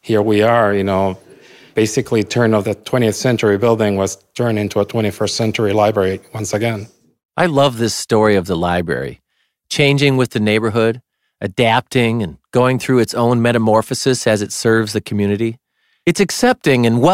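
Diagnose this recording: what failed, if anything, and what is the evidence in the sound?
Nothing in this speech recording points to a failure at any stage of the chain, and there is no audible evidence to attribute to wiring, conversion, buffering, processing, network or storage.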